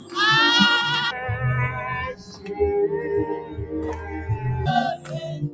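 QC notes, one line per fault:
Throughout: noise suppressor applied to music or sounds. A speech-tuned suppressor stays active and reads sustained tones and ambience as noise. It pulls them down while attacks pass. Level swings by roughly 15 dB, so the sound pumps and thins.
0.00–0.15 s, 2.13–2.56 s, 3.38–3.74 s, 3.95–4.15 s, 4.97–5.12 s: sound cut by the noise suppressor. Held or decaying material is treated as noise and ducked harder than its surroundings. The drops reach about 11, 12, 9, 7 and 11 dB. Tails are clipped short.
1.11–4.66 s: section at the wrong speed. This stretch plays at 0.538 times its proper rate. Pitch and tempo fall together, roughly ten semitones lower, so everything turns deep and sluggish. Playback against a mismatched clock is the likely cause.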